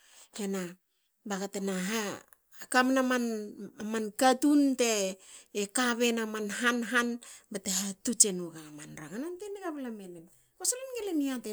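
Nothing in the speech here points to a technical fault anywhere along its length.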